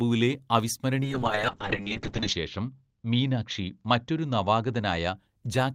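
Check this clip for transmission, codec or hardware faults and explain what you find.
One transmission fault: a call bitrate drop from 1.03 to 5.22 s. The encoder's bit budget collapsed, consistent with roughly 32 falling to 10 kbps, bottoming out for about 1.3 s. The coarser coding makes the speech rough and watery, and the bandwidth narrows from 20 kHz to 8 kHz, muffling it.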